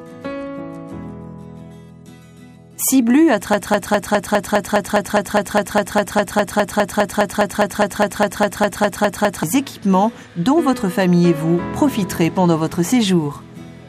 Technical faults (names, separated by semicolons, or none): broken-record loop